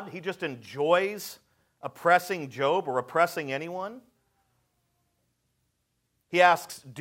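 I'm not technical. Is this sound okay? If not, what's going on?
Yes, nothing in this recording points to a technical problem: the signal stays steady, with no dropouts, glitches or sudden jumps in level anywhere along the way.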